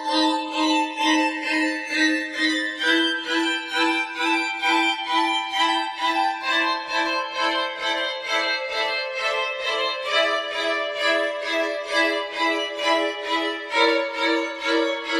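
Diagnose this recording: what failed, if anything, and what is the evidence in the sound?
Channels drifting apart at the converter stage: separate clocks roughly 150 ppm off slide inter-channel delay to about 2 ms, so mono sums sweep comb notches slowly, a drifting spectrogram striation.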